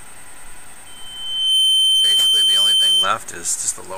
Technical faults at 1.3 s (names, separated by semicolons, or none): loudspeaker feedback squeal